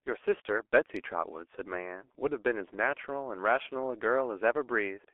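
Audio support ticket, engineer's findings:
G.723.1 codec damage across the whole speech clip: muffled, hoarse voice, smeared consonants, nothing below 300 Hz or above 3.4 kHz. The coarse 30 ms frame model fits a rate near 6 kbit/s. Heavy damage; plain telephone bandlimiting would stay clean, without the hoarseness.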